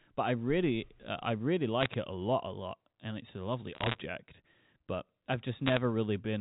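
Speech over a G.711 telephone line, band-limited below 4 kHz. Bit errors on the digital phone line add bursts of sharp ticks and crackle at 1.81–1.94 s, 3.75–4.01 s and 5.66–5.77 s. Flipped bits corrupt single samples, at roughly one bit in 140 to 200.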